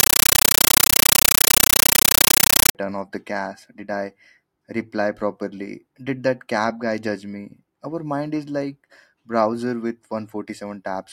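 From 0.0 to 2.75 s, a compressed stream is played as audio. Undecoded AC-3 data, taken as samples, gives loud chattering static in 9.3 ms bursts, 31.25 per second.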